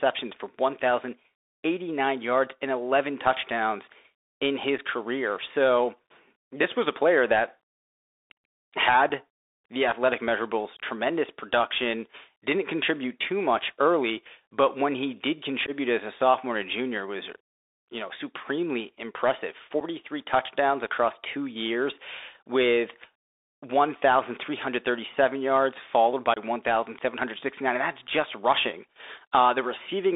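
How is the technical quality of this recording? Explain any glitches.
Technical quality is poor: the whole clip passes through a narrowband Bluetooth headset link, and the speech has five brief dropouts.

Bluetooth CVSD headset codec, throughout: the band runs only from about 300 Hz to 3.7 kHz, which fits a 64 kbps CVSD link. Its adaptive one-bit steps leave plainly audible scratchy sibilants and a granular hiss.

Unconcealed Bluetooth headset packet loss at 4.78 s, 9.09 s, 15.66–15.71 s, 19.80 s and 26.34–26.39 s: lost headset packets were replaced by silence or an idle pattern. This leaves abrupt holes of 7.5 ms, 15 ms or 22.5 ms, consistent with one to three packets.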